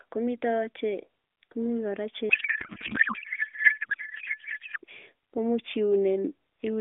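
Right after "kora che", from 2.30 to 4.78 s, the speech turns into garbled warbling noise that barely tracks it: a codec payload misread, with octet-aligned AMR frames apparently decoded as bandwidth-efficient.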